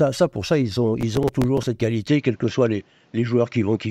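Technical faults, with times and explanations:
1.01–1.67 s, processor overload crackle: Just after "pour ça ils", a gritty tearing rides on the speech for about two-thirds of a second. Around ten tiny chunks go wrong in that stretch. Each one replays a scrap of stale audio with hard edges instead of fresh sound. Each chunk fits a short buffer of roughly 5 ms that the processor could not finish in time. The crackle stops once the load eases.
2.08–3.9 s, input switched to a poorer device: From 2.08 s to the end, the speech turns duller. Nothing is heard above 7.6 kHz, so the top of the band is cut off. A faint new background noise appears, about 40 dB below the speech. There is no gap at the change, and the level stays about the same. This change in tone points to a likely switch to a narrower-band microphone or a headset call profile.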